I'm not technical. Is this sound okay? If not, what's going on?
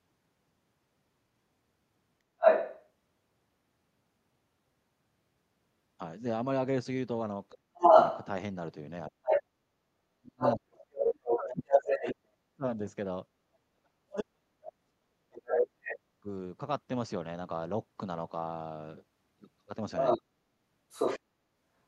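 No. Other side's voice leaking through happens at 2.38 to 2.86 s, 7.77 to 12.15 s, 15.45 to 15.94 s and 19.97 to 21.2 s. A second voice comes through, at times louder than the talker and at 15.45 s quieter. The likely cause is that the device's loudspeaker plays the other person, and the microphone picks it up without it being cleaned out.

Speech suppressed in double talk runs from 7.5 to 16.27 s. The talker's voice dips, sometimes almost to silence, for about five seconds in total. This likely happened because both people spoke at once, and the echo cleaning turned everything down.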